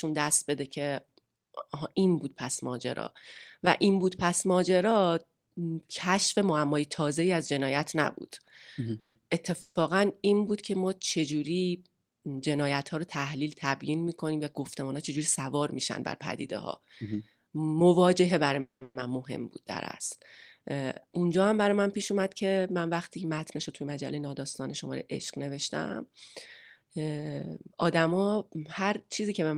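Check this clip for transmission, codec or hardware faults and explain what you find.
Yes, there are network-style faults here: four call audio freezes and two jitter buffer speed-ups.

Call audio freezes hit at 8.99–9.17 s, 9.61–9.77 s, and back to back at 18.61–18.83 s and 18.83–18.97 s. Packets were likely delayed and the buffer ran dry. You hear a brief fading buzz, then near silence, and the speech resumes intact but late, pushed back by 120 to 200 ms each time.

Jitter buffer speed-ups run at 14.59–15.63 s (105%) and 20.74–24.42 s (106%). The receiver trimmed tiny pitch-period slices to cut the backlog, removing under a tenth of a second and about a fifth of a second respectively. The speech sounds slightly rushed, with pitch unchanged.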